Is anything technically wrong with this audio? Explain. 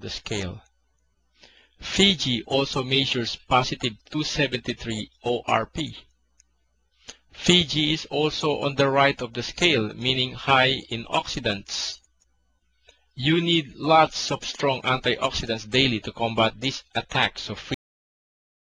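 Yes. A cut-off end occurs at 17.74 s: the final buffers were never written, so the sound stops mid-event and drops to digital silence, with no natural decay.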